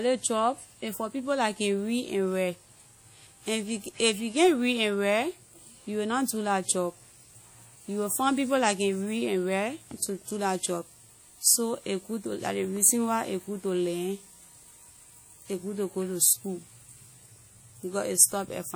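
WMA compression runs throughout the speech, from start to finish, and is likely the cause of its smeared, ringing quality. The transform coder spreads quantisation noise over long blocks and drops weak detail, leaving a washy, pumping hiss that fits a bitrate around 48 kbps, while content still extends to about 20.1 kHz.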